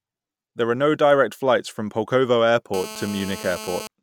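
From 2.74 s to 3.87 s a GSM phone buzz sits under the speech: a hard, raspy drone at about 217 Hz, roughly 14 dB below the speech level, nearly steady, as a phone on a call is. A nearby handset's 217-per-second transmit bursts are being rectified by the audio circuitry. On a spectrogram this shows as a comb of evenly spaced harmonic lines stacked up from 217 Hz; the waveform carries a regular pulse train riding on the signal.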